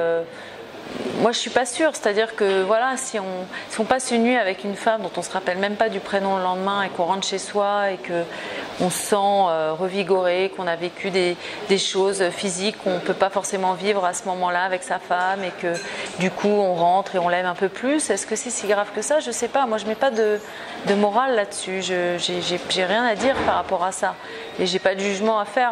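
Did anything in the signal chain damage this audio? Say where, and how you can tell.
No, nothing in the signal chain has left an audible mark on this audio. There is no stage to point to and no moment where the sound shows damage introduced along the way.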